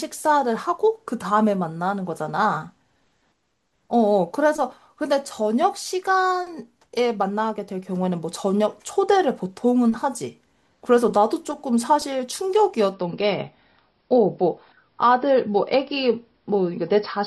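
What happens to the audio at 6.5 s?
Nothing goes wrong at 6.5 s: the speech plays through that moment intact, with no dropout, click, glitch or other fault.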